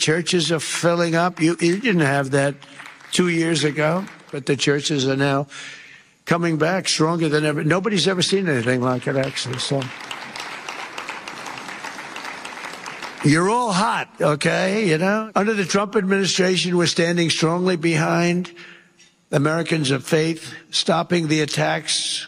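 Nothing in the audio stands out as a technical fault; it runs along without any glitch worth pointing to.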